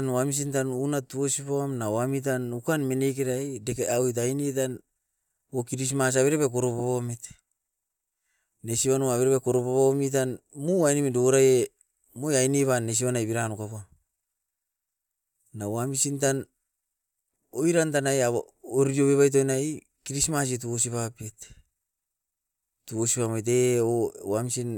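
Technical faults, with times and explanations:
Nothing here calls for a time stamp or an explanation, since no technical fault turns up anywhere in the recording.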